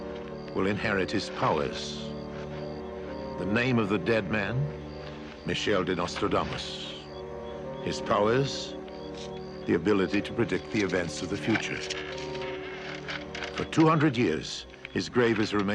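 No technical faults are audible.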